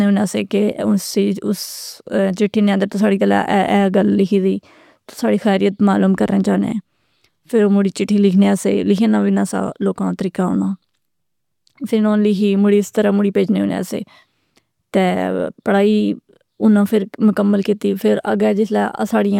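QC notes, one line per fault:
No technical faults are audible at any point in the speech recording, and the signal holds together without any audible break or disturbance.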